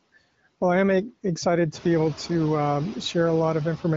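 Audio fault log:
Throughout, noise suppressor artifacts: steady background is cut by about 18 dB band by band between phrases, then returns under speech, including after the room noise rises near 1.5 s.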